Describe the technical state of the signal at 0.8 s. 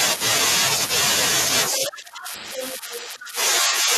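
At 0.8 s the signal is intact, with no audible dropout, distortion, clipping or other fault at that point.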